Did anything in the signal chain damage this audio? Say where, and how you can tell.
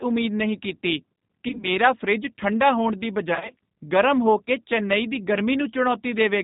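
Yes. At the codec stage, G.729 codec damage runs throughout. Nothing above 4 kHz survives, and the sound is rough and synthetic, which fits an 8 kbit/s stream.

On the network, VoIP packet loss concealed by the speech codec occurs at 1.48 to 1.68 s and 3.35 to 3.53 s. The decoder extrapolates its last pitch and filter, so sound is stretched into a buzzy tone or coloured noise that fades, then recovers weakly.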